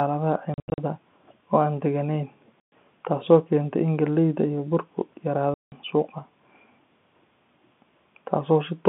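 Speech over a G.711 telephone line, band-limited to roughly 150 Hz to 3.5 kHz, is chopped by packet loss filled with silence at 0.54 to 0.78 s (scattered gaps, longest 80 ms), 2.6 to 2.72 s and 5.54 to 5.72 s. These gaps fit 20 ms packets and show as blank vertical stripes with hard edges.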